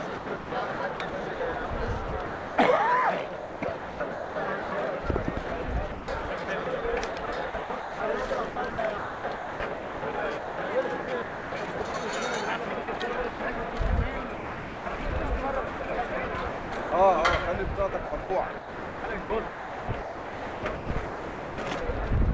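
Between 0.2 and 2.6 s, 3.4 and 4.7 s, 5.5 and 11.9 s, 12.6 and 13.7 s, 14.3 and 15.1 s, 15.7 and 16.9 s, and 18.1 and 21.6 s the sound is chopped, likely by the voice detector repeatedly gating transmission, with comfort noise filling between 0.22 and 2.3 s of each stretch. Edges drop out. A spectrogram shows featureless noise blocks interrupting the detail, all stopping at 8 kHz like the rest of the G.722 call audio.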